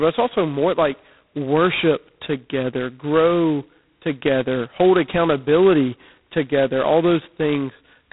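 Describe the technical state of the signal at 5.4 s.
At 5.4 s the speech carries G.726 ADPCM damage, present from start to end rather than at that moment alone. The coder sends only a coarse difference from an adaptive prediction, and the harsh, rasping hiss that tracks the speech level fits the 16 kbit/s rate, about 2 bits a sample. A spectrogram shows a hard ceiling near 3.9 kHz with granular noise filling the band under voiced energy. The waveform looks roughened, with noise riding the speech envelope.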